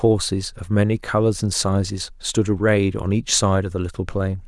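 No technical faults occur at any point in the speech.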